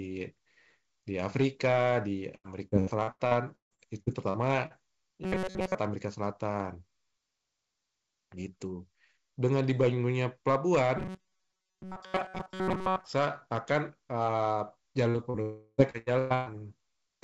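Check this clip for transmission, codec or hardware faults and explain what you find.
Several transmission faults are present, clustered around 2 to 5 s, 11 to 13 s and 15 to 16.5 s, plus hard clipping across the whole speech clip. The call path's band limit, with nothing above 8 kHz, fits a wideband call codec.

Hard clipping runs throughout. The signal is driven about 7 dB past what the chain can pass, so peaks are sliced flat on just under one percent of samples. The squared-off tops add high harmonics, heard as crackle and grit on loud syllables.

Repeated packet loss (robotic sound) occurs from 2.36 to 4.73 s and from 15.90 to 16.49 s. The first stretch has eleven gaps, the longest 155 ms, with about 28% of the span patched. The second has four gaps, the longest 120 ms, with about 61% patched. Each hole is filled by extending the previous sound, giving choppy, metallic speech with pieces missing.

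Robotic sound from repeated short buffers appears at 5.23 to 5.75 s and 10.97 to 13.05 s. A fixed 188 Hz buzz is imposed on the speech, likely because audio arrived too seldom and roughly 5.3 ms chunks were looped over most of each stretch. The result is a rigid, metallic drone that still loosely tracks the speech.

Short concealed packet loss occurs at 15.10 to 15.17 s and 15.30 to 15.37 s. About 40 ms of audio is lost each time. The receiver bridges each gap by continuing the last sound and then crossfading back, which produces a brief smear or wobble where a short consonant can drop out.

A long network dropout runs from 15.42 to 15.81 s. About 0.36 s of audio is missing, likely because nothing arrived in that window. The last sound is stretched into a fading buzz, ending in roughly 20 ms of silence before real audio resumes, with the lost portion never heard.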